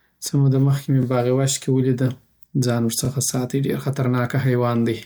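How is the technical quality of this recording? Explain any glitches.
The recording has one recurring glitch. Overlapping chunks: the speech was handled in 2.0-second blocks, and each new block began about 23 ms before the previous one finished, so that sliver plays twice. It happens at 1.03–1.05 s, right after "څه موده مخکی می", and at 3.05–3.08 s, between "کی ولیده ځان" and "ساتی ډیر خطر". Each join produces a brief click-like stutter, and the two are spaced about one chunk apart.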